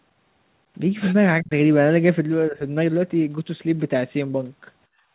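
Speech, band-limited to nothing above 4 kHz, which fits a narrowband telephone codec such as G.711. The speech drops out sharply at 1.41 to 1.51 s and dips more gently at 2.49 to 2.62 s, likely speech suppressed in double talk. Near the end, from 4.88 to 5.14 s, the room sound falls by about 21 dB. That is background gated by the echo canceller, clamping the microphone while it acts.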